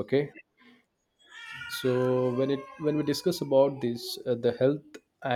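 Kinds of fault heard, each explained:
Compressed frames skipped: the decoder never plays certain frames of the compressed speech, either because they are absent from the file or because it rejected them as damaged. The frames here last about 24 ms, and the audio jumps forward twice. At 1.72 s roughly two frames disappear, close to 50 ms. At 4.14 s about one frame is lost.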